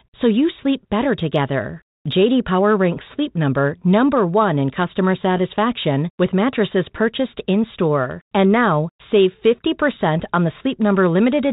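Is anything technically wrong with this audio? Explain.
No, nothing technically wrong is heard here.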